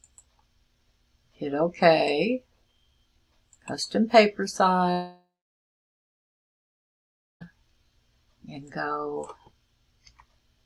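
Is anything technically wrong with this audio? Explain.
Yes. From 4.91 to 7.43 s there is a long network dropout. Roughly 2.5 s of audio likely never arrived, so the receiver smeared the last sound into a fading buzz, then held about 2.2 s of near-silence. The waveform decays to a flat line and the spectrogram goes dark until the audio resumes at 7.43 s without the lost part.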